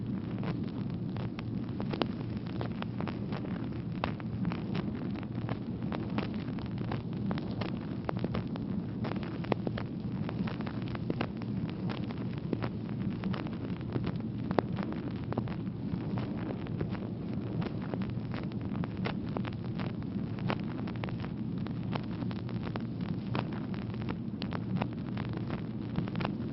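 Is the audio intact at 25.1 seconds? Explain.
Yes, the audio is intact at 25.1 seconds, with nothing breaking up or interrupting the sound at that moment.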